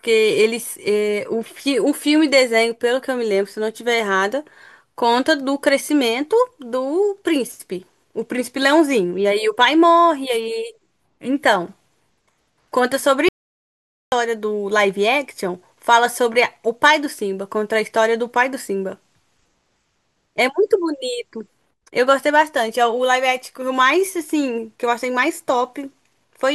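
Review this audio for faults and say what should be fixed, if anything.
At 13.29 s the speech cuts off mid-flow into silence, with no room tone at all, and returns at 14.12 s, so about 0.84 s of speech is lost. This audio dropout to silence is likely from the input briefly disconnecting or muting while the recorder kept writing silence. Secure cables and connections and check input mute states before recording.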